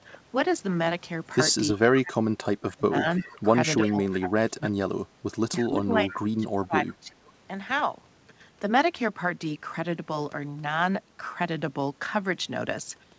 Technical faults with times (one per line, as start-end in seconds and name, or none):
1.73-3.07 speech suppressed in double talk
3.17-3.42 echo leak
3.83-4.06 echo leak
3.89-5.05 speech suppressed in double talk
5.62-7.35 speech suppressed in double talk
6.10-6.14 echo leak